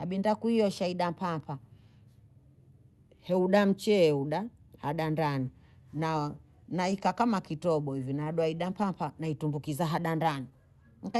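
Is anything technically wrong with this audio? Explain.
Yes, there is one fault: a short stall from a late packet between 8.23 and 8.29 s of this speech. A sound is held slightly too long, with a faint buzzy smear. A packet arrived late, the jitter buffer ran dry, and the receiver stretched the last sound by about 26 ms until it came. Nothing was lost, but playback runs 26 ms later from there on. The sound also passes through a call codec, likely Opus, which limits the top end to about 12 kHz.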